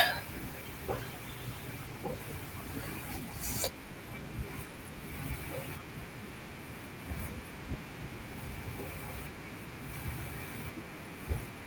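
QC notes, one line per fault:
0.31–5.57 s, call bitrate drop: speech turns rough and muffled as the encoder codes far more coarsely, consistent with a fall from 64 to 19 kbps, lowest for about 2.4 s; the spectrogram shows the upper band cut away and blotchy, smeared detail below.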